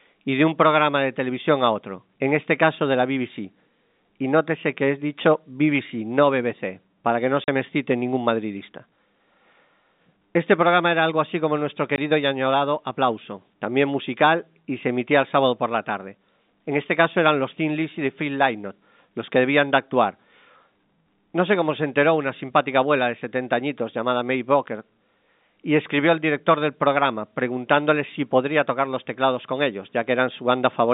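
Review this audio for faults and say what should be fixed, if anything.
Packet loss filled with silence cuts two gaps into the speech, at 7.44 to 7.48 s (40 ms) and at 11.96 to 11.98 s (20 ms). The gap lengths point to 20 ms packets, which fits the G.711 telephone coding carried here. When a packet fails to arrive, the receiver plays digital silence in its place. The abrupt drop to silence and the return leave hard edges, and the speech breaks off audibly. Enable packet loss concealment at the receiver and size the jitter buffer to ride out short network losses.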